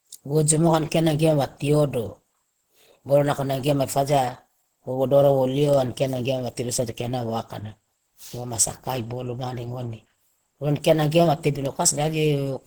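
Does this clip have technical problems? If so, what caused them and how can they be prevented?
Yes. Throughout, the speech sounds hoarse and grainy, with plainly audible coding damage. Content still reaches about 20.2 kHz. This is likely Opus compression in its hybrid mode, where the lower band is coded for speech, at a rate near 16 kbps. Encoding at a higher bitrate would prevent it.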